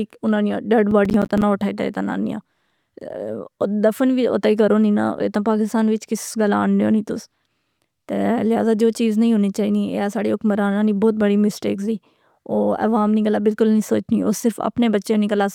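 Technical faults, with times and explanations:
0.91–1.42 s, processor overload crackle: just after "اناں نیاں ڈیڈ", the sound breaks into gritty crackle as the processor misses roughly ten deadlines over this stretch on buffers of about 10 ms. Each miss drops in a hard-edged gap of silence, and the gaps together tear at the audio until the load passes.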